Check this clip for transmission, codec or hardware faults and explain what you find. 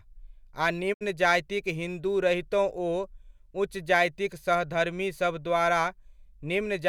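One fault: a digital broadcast dropout from 0.92 to 1.03 s. The speech fades out over about 20 ms into a silent gap, consistent with two corrupted frames (roughly 64 ms of audio lost) being muted by the receiver. The waveform shows a flat hole, and the spectrogram shows a blank vertical band.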